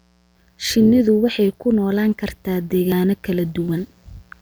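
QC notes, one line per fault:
throughout: mains buzz, a steady raspy buzz around 40 dB below the speech, made of 60 Hz harmonics from switching spikes leaking into the signal path.
2.92 s: dropped buffer (overrun), the speech jumps ahead just after "waxay ku noolaan kartaa", losing about 40 ms, likely from the hardware overwriting samples before the program collected them.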